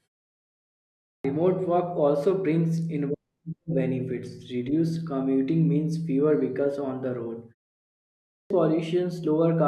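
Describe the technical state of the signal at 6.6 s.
At 6.6 s the speech signal is intact, with no fault audible at that moment.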